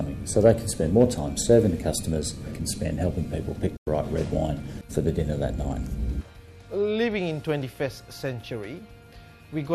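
At 3.76 s the audio drops out in a digital broadcast dropout, returning at 3.87 s. The receiver stopped getting decodable frames and muted its output rather than play corrupted data. The level fades to silence over about 8 ms, so there is no hard click, and what was transmitted during the gap is simply missing. The lost span of roughly 96 ms fits a handful of consecutive bad frames.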